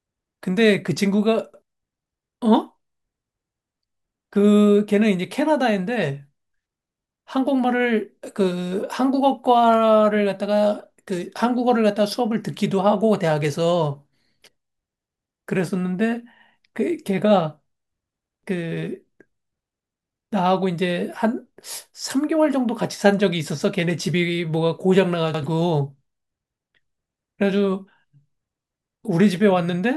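Speech, with repeated-buffer stutters at 1.54 s, 18.26 s and 25.34 s. Late audio makes an 85 ms piece replay with hard joins, twice at 18.26 s. This fits a 4096-sample buffer.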